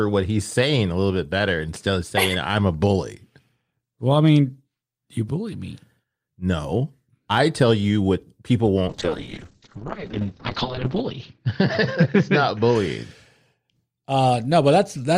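At 8.88 s, just after "tell you what people", a call bitrate drop sets in: the call's bandwidth estimate fell, and the encoder was pushed from a rate that fits about 48 kbps down to one that fits about 10 kbps, holding at its lowest for 1.88 s. Coded more coarsely, the speech turns rough and watery, and the audio band narrows from 20 kHz to 8 kHz, dulling it. Quality returns by 12.82 s.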